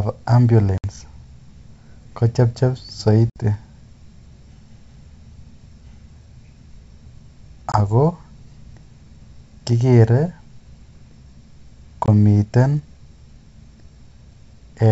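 Packet loss on an ADPCM call cuts hard-edged silent holes into the speech at 0.78–0.84, 3.30–3.37, 7.72–7.78 and 12.06–12.09 s, losing 60, 60, 20 and 20 ms. The receiving decoder's predictor and step size drift from the sender's, so speech resumes slightly distorted, then settles.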